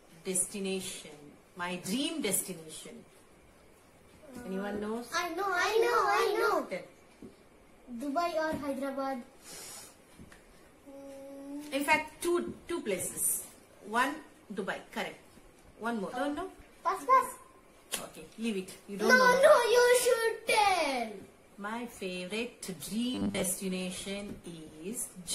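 From 23.15 to 23.47 s, about a third of a second, the sound collapses into a rigid, metallic buzz with a fixed pitch of 100 Hz. It still loosely tracks the contour of the material underneath. This is robotic sound from repeated short buffers, likely caused by fresh audio arriving too slowly and the gap being filled by looping a 10 ms fragment. Most of that span is repetition rather than real signal, so the original detail there is lost.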